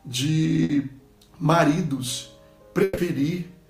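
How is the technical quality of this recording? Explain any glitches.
Two short dropouts interrupt the recording, both from a burst of packet loss. At 0.63 to 0.71 s about 60 ms goes missing, and at 2.83 to 2.99 s about 140 ms. Packets failed to arrive in time, so the receiver extended the last sound it had and faded it down across each gap. This produces a brief held, dying tone or hiss. The audio then jumps ahead, skipping the missing stretch.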